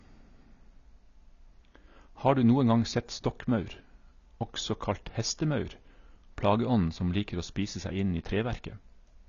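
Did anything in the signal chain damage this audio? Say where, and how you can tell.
Yes. The damage sits at the codec stage and runs through the whole speech clip. Nothing is present above 7 kHz, and sibilants sound dull and smeared with a fizzy texture. This points to AAC compression, likely AAC-LC at a starved bitrate around 24 kbps, quantising away detail and lowering the cut-off.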